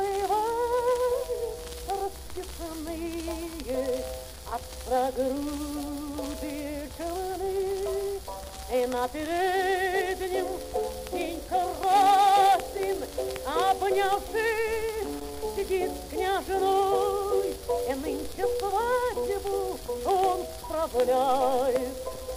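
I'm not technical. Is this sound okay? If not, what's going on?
No. Loose connector crackle appears at 4.34 to 4.39 s and 15.02 to 15.41 s: a worn plug contact briefly cutting in and out, causing scratchy bursts.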